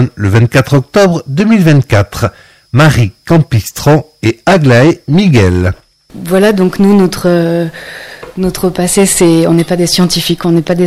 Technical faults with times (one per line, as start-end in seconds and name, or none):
0.00-10.86 hard clipping